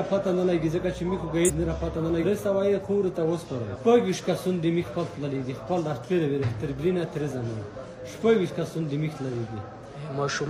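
The audio has compressed frames skipped twice, at 1.44 to 1.51 s and 2.19 to 2.25 s. Whole coded frames never play, so the sound jumps ahead, by about half a second and then slightly less. Each jump is a multiple of a frame length that fits roughly 46 ms.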